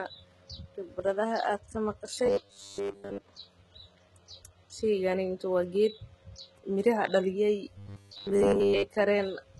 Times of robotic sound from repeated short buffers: 2.26-3.24, 7.78-8.84

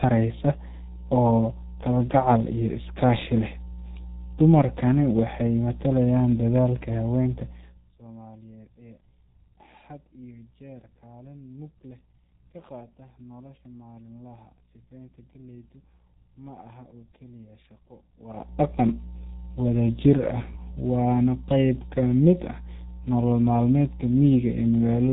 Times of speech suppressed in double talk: none

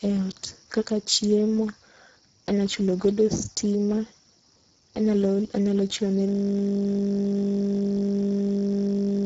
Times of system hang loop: 6.29-9.26

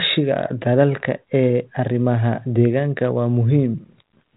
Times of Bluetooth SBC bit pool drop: none

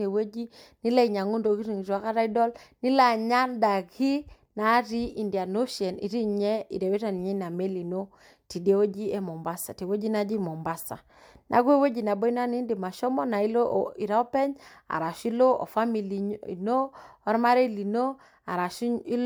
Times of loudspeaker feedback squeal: none

